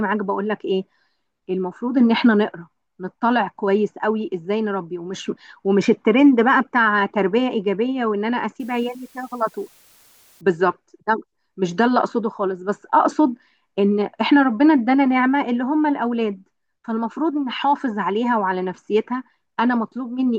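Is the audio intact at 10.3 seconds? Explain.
No. Low bit depth with dither runs from 8.60 to 10.41 s. The speech is reduced to 8 bits with dither added before rounding, so the quantisation error becomes a steady, even hiss roughly 35 dB below the speech, with no distortion.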